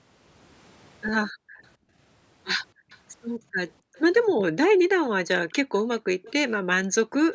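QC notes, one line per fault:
1.32–1.97 s, 2.74–3.94 s, 4.69–4.98 s, 5.62–5.73 s and 6.91–7.14 s, background gated by the echo canceller: the room tone sinks by as much as about 40 dB for up to half a second, then returns. The microphone is being suppressed while far-end audio plays, so the floor vanishes rather than cutting mid-sound as a packet dropout would.
2.90–2.98 s, 3.94–4.00 s and 6.22–6.33 s, echo leak: faint delayed scraps trail the speech by a steady 270 ms or so, well below the main level. This is likely residual loudspeaker pickup the canceller missed. The fixed, discrete delay separates it from room reverberation, which would smear continuously.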